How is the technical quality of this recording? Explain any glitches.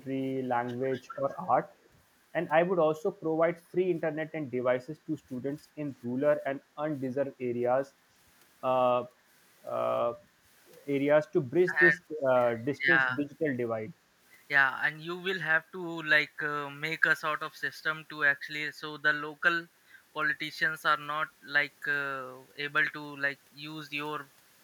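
The recording has echo-canceller problems. They cluster in the first two seconds, with a few brief dips later.

Speech suppressed in double talk occurs at 0.80–0.93, 1.09–1.20, 11.70–11.75 and 12.78–12.85 s. The speech dips briefly, at most by roughly 15 dB. The likely cause is the canceller turning down overlapping talk.

Echo leak occurs at 1.03–1.09, 1.29–1.47 and 1.83–1.89 s. A faint copy of the speech returns 251 ms late, roughly 30 to 40 dB down. It is likely loudspeaker echo the canceller missed.

Background gated by the echo canceller occurs at 10.29–10.37 s. The room sound drops by about 7 dB for a moment. The canceller clamped the microphone while the loudspeaker played.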